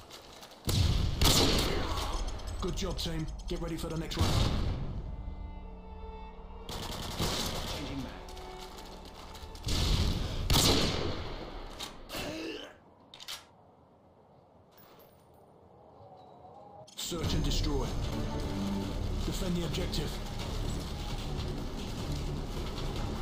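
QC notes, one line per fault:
No faults found: nothing audible calls for a QC entry.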